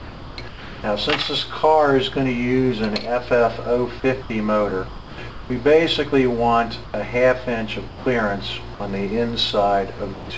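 The sound stutters in and out at several points. This happens from 0.00 to 0.84 s (about 0.74 s filled), 4.00 to 4.30 s, 4.88 to 5.50 s (about half a second filled) and 9.98 to 10.30 s. This is sound chopped by the voice detector, likely the sender's voice activity detection toggling on and off and the receiver filling the gaps with comfort noise. Separately, the sound briefly gives way to steady noise at 6.84 to 6.94 s, 7.88 to 8.06 s and 8.74 to 8.80 s, losing roughly 70, 150 and 50 ms of the real signal before it returns. That is likely sound dropped by the voice detector: quiet passages were taken for background, transmission stopped, and comfort noise stood in until the detector triggered again. All of it is heard through a G.722 call path at 64 kbps, with nothing above 8 kHz.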